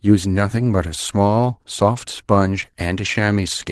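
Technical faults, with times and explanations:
1.25 s, lost packet rebuilt from error correction: for about 20 ms, consistent with a single lost packet, the sound turns briefly rougher and grainier, then returns to normal. The following packet carried a low-bitrate spare copy of the missing stretch, and the decoder played that coarser copy in its place. Unlike a dropout or an estimated concealment, nothing falls silent and nothing is smeared or repeated, only a short patch of extra coding noise.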